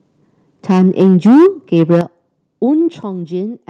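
A speech clip in which the loudest syllables from 0.69 to 1.47 s and again from 1.76 to 2.01 s turn harsh and crackly, peaks flattened about 6 dB past the converter's limit, roughly a fifth of the samples in the first stretch. That points to microphone overload, likely from an input set too high. The distortion rides only on the peaks, unlike codec grit, which stays present at every level. The level then falls in single steps at 1.02 s (about 2 dB), 2.01 s (about 8 dB) and 3.03 s (about 5 dB), with voice and background dropping together. That is the microphone volume stepped down, likely by the call software reacting to the clipping. These are instant steps, unlike a limiter's smooth dip, and the lower level holds afterwards. Underneath, the call path's top end stops near 12 kHz, which fits Opus at a moderate bitrate.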